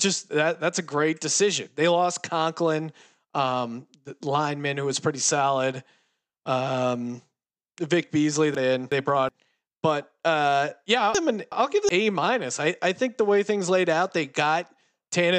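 Chunks out of order: a roughly 370 ms chunk arrives one slot late at 8.55–9.29 s and again at 11.15–11.89 s, so the speech jumps.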